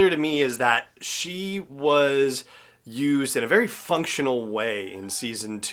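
A call bitrate drop runs from 0.31 to 2.49 s, the speech turning coarse and dull as the encoder starves, which fits a fall from about 32 to 18 kbps.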